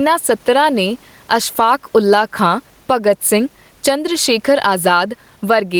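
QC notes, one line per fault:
Throughout, gain pumping. The level swing is around 10 dB, against room noise that otherwise sits about 43 dB below the speech. Loud and quiet syllables land closer in level, and the speech sounds squashed. The likely cause is far too much microphone gain being clamped by a fast limiter or compressor.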